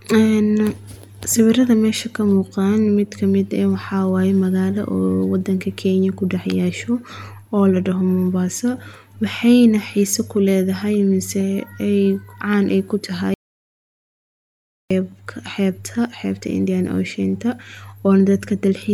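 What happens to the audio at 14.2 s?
At 14.2 s the speech is inside an audio dropout to silence running from 13.34 to 14.91 s, about 1.57 s, right after "ay ku". The input was likely lost while recording continued writing silence, so unlike a natural pause the room tone vanishes completely.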